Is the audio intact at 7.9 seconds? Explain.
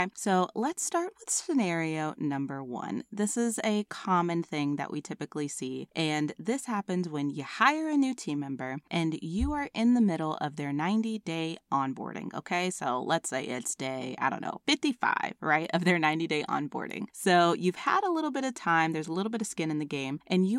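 Yes, the speech at 7.9 seconds plays through intact, with no dropout, click, distortion or other fault at that moment.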